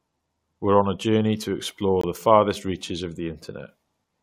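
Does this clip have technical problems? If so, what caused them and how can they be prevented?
Yes. Right after "a journey to explore" and before "the farthest reaches of", the speech drops out for a brief hard-edged silence from 2.01 to 2.04 s, about 21 ms long, which sounds like a tiny click-bounded stutter. This is a gap between stream segments: at the boundary near 2.0 s, the timestamps of two adjacent segments leave 21.3 ms unaccounted for, and the player fills that hole with silence. Nothing is lost; the audio is just pushed later. Preventing it means making each segment's start timestamp exactly match the previous segment's end when packaging the stream.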